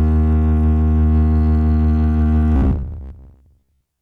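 A music clip that, from 2.56 s to the end at 4.02 s, takes on robotic sound from repeated short buffers: a rigid, metallic 66.7 Hz buzz over most of the music. The likely cause is a 15 ms chunk being replayed while fresh audio is skipped. The waveform shows identical 15 ms cycles, and the spectrogram shows evenly spaced harmonic lines every 66.7 Hz.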